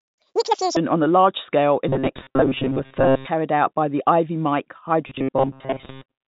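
From 0.00 to 0.77 s there is a section at the wrong speed: the speech runs at 1.96 times its recorded rate, so every syllable is hurried and the pitch jumps up by about ten semitones. Speed and pitch shift together, the signature of audio played back against the wrong clock. The likely cause is a player or editor misreading the timing of this opening stretch.

From 1.89 to 3.27 s comes robotic sound from repeated short buffers. Fresh audio stops arriving often enough, so the same short slice is looped to fill the gaps, and most of the real signal in this span is skipped. The loops impose a steady 133 Hz buzz, which fits a buffer of roughly 7.5 ms, and the speech turns metallic and rigid while loosely keeping its shape. This is likely an audio pipeline starved of data. Throughout, the band stops near 4 kHz, as telephone coding produces.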